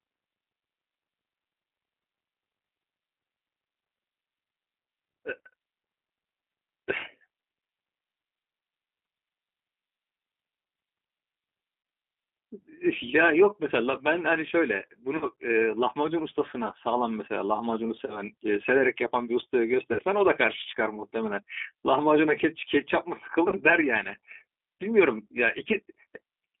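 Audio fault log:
throughout, G.729 codec: the speech sounds thin, slightly rough and synthetic, with nothing heard outside a band of about 200 Hz to 3.6 kHz. The 8 kbit/s G.729A coder rebuilds each 10 ms frame from a vocal tract filter, a pitch predictor and a few pulses, which produces this roughness.
11.83–11.85, 15.17–15.25, 18.06–18.21, 19.93–20.03 and 23.48–23.54 s, VoIP packet loss concealed by the speech codec: brief buzzy or noisy, smeared stretches fade and leave the voice weak for a moment afterwards. Between 20 and 60 ms of audio goes missing at each point, which fits one to three lost packets. The decoder fills each gap by extending the last pitch and filter at falling gain, and its frame-to-frame memory keeps the following speech distorted until it recovers.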